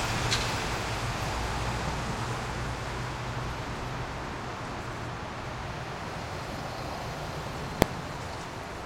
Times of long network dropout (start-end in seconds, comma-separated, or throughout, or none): none